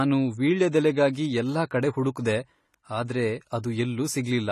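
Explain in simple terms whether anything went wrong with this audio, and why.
The speech was most likely squeezed through AAC compression at a low setting. The encoder threw away detail it judged unimportant, so throughout the clip nothing sounds above about 14.1 kHz, leaving the voice dull, smeared and fizzy on hissing sounds.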